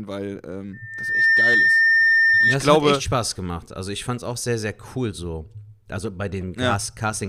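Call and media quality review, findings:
Loudspeaker feedback squeal, 0.73 to 2.62 s: 1.8 kHz tone swells over roughly half a second to about 10 dB above speech. Mic-to-speaker loop gain exceeding unity.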